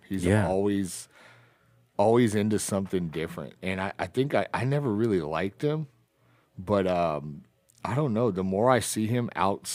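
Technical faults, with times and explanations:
No technical faults can be heard in this speech recording. There is nothing to list by time.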